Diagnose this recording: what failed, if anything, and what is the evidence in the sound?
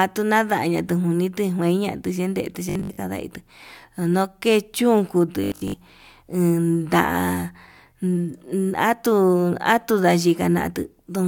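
Robotic sound from repeated short buffers appears twice in the speech, from 2.69 to 2.99 s and from 5.44 to 5.74 s. Each stretch becomes a rigid, metallic 50 Hz buzz that roughly tracks the speech, with most of the real audio missing. The likely failure is at the driver or buffer stage: audio arrived too slowly, so the last block, which fits about 20 ms, was replayed and imposed that fixed pitch.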